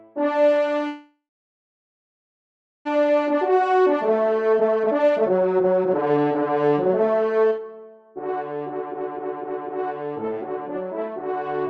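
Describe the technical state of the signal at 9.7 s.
At 9.7 s the signal is intact, with no fault to be heard, only the ordinary character of the WebRTC call path it passed through.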